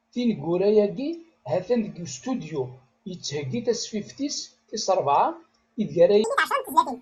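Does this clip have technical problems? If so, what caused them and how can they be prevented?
Yes. From 6.24 s to the end, after "tis rebɛa ideg", the audio was read two samples at a time (double speed): the reader took each pair of samples as one frame, so the speech runs twice as fast and an octave higher. To prevent it, set the channel count and sample width explicitly when opening the stream so the reader's frame size matches the data.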